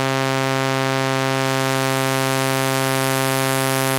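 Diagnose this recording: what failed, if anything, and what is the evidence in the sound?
Nothing failed; no faults heard.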